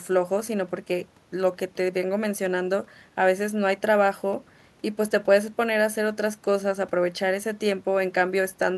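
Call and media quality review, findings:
No faults found in the speech clip. Nothing to escalate for this ticket.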